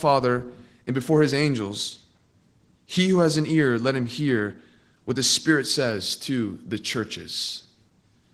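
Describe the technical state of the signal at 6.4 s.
At 6.4 s the speech carries Opus voice compression, which runs through the whole clip. Linear prediction codes the band below 8 kHz with a coarse excitation. A thin transform layer covers the top. The damage is plainly audible: hoarse, muffled and slightly robotic, which fits a bitrate near 16 kbps.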